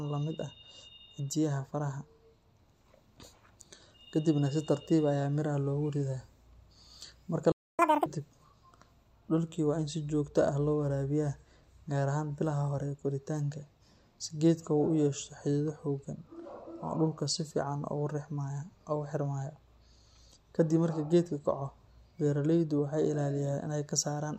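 The player appears to have starved of data, likely because its output thread was blocked, causing a playback stall in this speech recording: the audio cuts to silence from 7.52 to 7.79 s, a gap of about 270 ms, before picking up where it left off. The player then works off its backlog through catch-up at higher speed, resampling at 2.0 times normal rate from 7.79 to 8.06 s, so the speech briefly rushes and jumps up by roughly ten semitones before settling back to normal pitch and pace.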